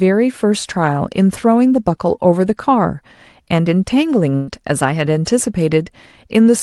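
At 4.35 s the speech turns briefly into a smeared, held sound that fades over about 120 ms until 4.49 s, then picks up again a little further along, as though a short piece had been skipped. This is a burst of packet loss on the call link. Several consecutive packets never arrived in time, so the receiver stretched out the last sound it had, lowering its level, and about 120 ms of the original speech never arrived. The band-limiting around 12 kHz comes from the call codec.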